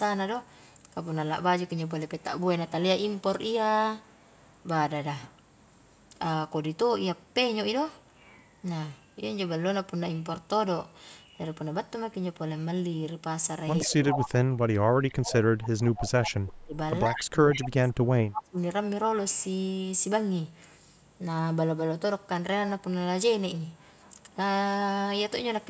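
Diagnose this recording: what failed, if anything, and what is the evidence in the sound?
Echo leak at the call-processing stage. A delayed copy of the speech sits about 131 ms behind the original. It appears at 13.81 to 14.29 s, 15.10 to 15.14 s, 15.61 to 16.11 s and 17.16 to 17.68 s. The first burst is strong, only about 5 dB below the speech. The last two sit about 15 dB down, and the tiny one at 15.1 s is faint. The likely cause is a far-end loudspeaker whose echo canceller let part of the microphone pickup return.

Speech suppressed in double talk, also in call processing. The speech level dips hard at 13.85 to 15.34 s, 16.15 to 16.74 s and 17.08 to 18.57 s. The deepest drops reach about 35, 25 and 30 dB. The first and last dips overlap echo bursts, so both sides were active together. The echo canceller likely could not tell the talker from the returning echo. It pulled down the whole signal.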